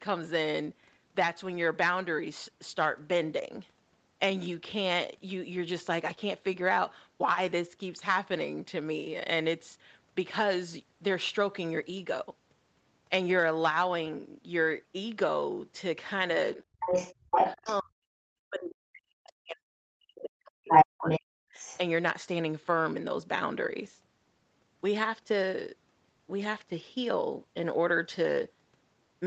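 At 16.55 s the speech dips briefly, for well under a tenth of a second and by only a few dB. It's likely speech suppressed in double talk: the echo canceller hears both sides at once and pulls the level down because it can't separate the talker from the loudspeaker echo. From 16.8 to 17.79 s you get the other side's voice leaking through. That's a second voice that slipped past the canceller, likely because the loudspeaker echo wasn't fully removed, and it sits a bit louder than the talker.

The big one runs from 17.13 to 21.61 s, likely the same double-talk suppression but heavy this time. For around four seconds the talker gets squashed in pieces, dropping as much as 40 dB, so it keeps cutting out while the far end talks. Inside that stretch, 20.69 to 21.2 s brings more leakage that's clearly louder than the talker, likely echo again. Then 21.54 to 21.78 s has a last faint scrap of the other side, well under the speech and likely residual echo. 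Throughout, the call codec caps the top end around 8 kHz.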